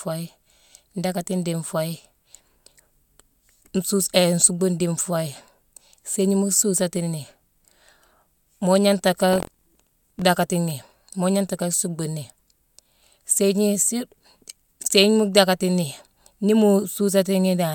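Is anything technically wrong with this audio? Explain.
Yes. From 9.31 to 10.22 s there is buffer tearing. The software filling the ring buffer and the hardware reading it out have drifted out of step with each other, so their positions cross within every period. A small slice of each buffer replays speech from one lap earlier, roughly 70 ms old, with hard joins on both sides. The result is a rough, robotic buzz riding on the speech at about 43.1 Hz, which fits a 1024-sample buffer.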